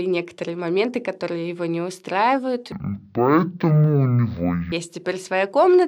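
From 2.72 s to 4.72 s the speech drops to half speed and an octave lower, the sign of stereo read as mono. The left and right samples, which alternate in the stream, were taken one after another as a single channel, so each stereo frame became two mono samples. What sets it apart from a plain sample-rate mismatch, which also slows and lowers the sound, is the fainter mirror image of the speech in the upper half of the spectrum.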